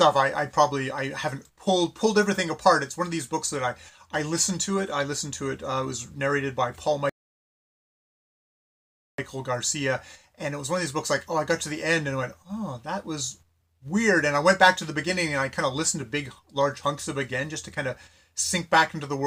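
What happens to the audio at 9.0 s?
A rebuffering stall: the player ran out of downloaded audio at 7.09 s, so silence holds until 9.18 s, then playback resumes exactly where it stopped, adding about 2.09 s.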